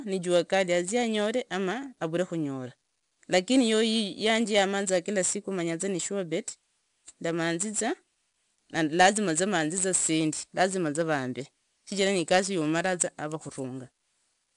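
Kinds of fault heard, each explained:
4-bit ADPCM compression: coarse adaptive steps leave plainly audible gritty hiss tracking the speech level, unlike steady noise; nothing above 10.7 kHz, suggesting a roughly 22 kHz rate.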